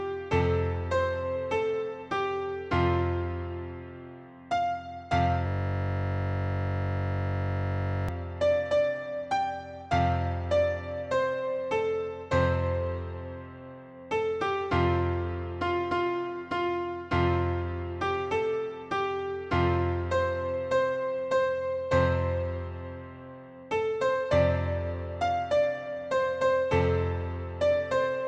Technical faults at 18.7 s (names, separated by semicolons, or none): none